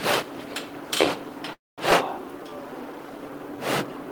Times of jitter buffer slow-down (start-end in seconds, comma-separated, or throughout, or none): 2.31-3.98